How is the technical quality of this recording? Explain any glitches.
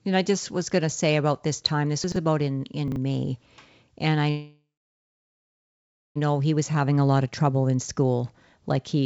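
The recording has three glitches, and the audio never reaches above 8 kHz, which fits a G.722 call codec.

Chunks out of order at 2.04 to 2.16 s and 2.88 to 2.96 s. A 40 ms chunk plays two chunks late, then one late. Nothing is lost, but each moment sounds jumbled.

A call audio freeze runs from 4.30 to 6.18 s. The last sound is carried on and fades, then about 1.5 s is silent. The likely cause is held-up packets emptying the jitter buffer. Nothing is missing, but everything after plays about 1.86 s late.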